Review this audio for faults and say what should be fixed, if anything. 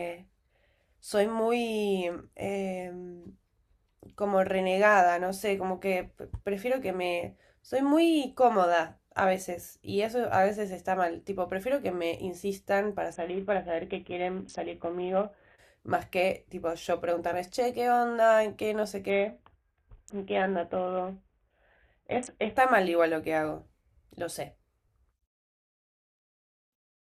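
A Bluetooth SBC bit pool drop hits the speech twice, 13.13 to 15.58 s and 19.10 to 22.57 s. The treble dulls and gritty noise rises. This fits the bit pool falling from 28 to 5, near 54 kbps. Reduce link congestion or interference so the rate holds.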